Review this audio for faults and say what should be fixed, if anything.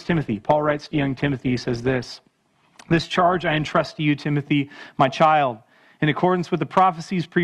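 The first 4.0 seconds show an adaptive stream starting at a low bitrate. The player began on a cheap rendition to start fast, with nothing above 12.2 kHz and heavier codec smearing, which fits Opus at 16 kbit/s. At 4.0 s it switched up, which fits 64 kbit/s, and the treble returns at once with no gap. A fixed low-pass or a mid-stream bandwidth drop would not clear abruptly like this. To prevent it, start playback on a higher rendition or buffer briefly before starting.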